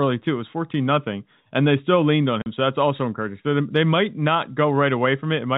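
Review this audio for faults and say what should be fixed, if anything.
Packet loss filled with silence cuts the speech from 2.42 to 2.46 s, just after "they still leaned on". The receiver inserted 40 ms of digital silence, a gap that fits two lost 20 ms packets. On the waveform it appears as a flat line with sharp cliffs at both ends. On the spectrogram it shows as a blank vertical stripe across the telephone band that G.711 A-law limits to 4 kHz. Enabling packet loss concealment and a jitter buffer at the receiver would prevent it.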